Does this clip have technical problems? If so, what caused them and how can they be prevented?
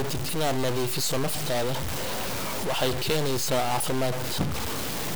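Yes. The likely cause is a stuck bit: one data bit in the converter or on a data line held at a fixed value for the whole clip, a fairly high-order bit weighing roughly -25 dBFS. About half the samples land off by that step, in a pattern that follows the speech waveform, so the speech carries a harsh, buzzy distortion throughout. Because the bit also flips with the sign of small values, pauses fill with noise at about that level. Preventing it means testing converters and digital interconnects with full-range and near-silent signals before recording.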